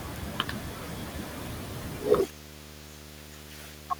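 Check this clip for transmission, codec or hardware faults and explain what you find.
One hardware fault is present: video or display buzz, running from 0.88 s to the end of the clip. A display or video cable is coupling its field-rate interference into the audio path, so the speech sits over a steady 75 Hz buzz with a layer of harsh hash above it. The buzz stays well below the speech, roughly 15 dB down. The 75 Hz rate ties it to the picture refresh rather than to mains hum.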